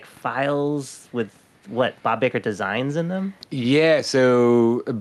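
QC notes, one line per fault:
Throughout, gain pumping: the level keeps riding up and down by around 5 dB as the speech gets louder and softer, so loud and quiet stretches end up squeezed closer together and the whole thing sounds a bit squashed. That's most likely the input gain set too hot for the mic with a fast limiter or compressor clamping down on each loud moment. Room noise sits about 43 dB below the speech, and the top end stops near 12 kHz, which fits the Opus call path.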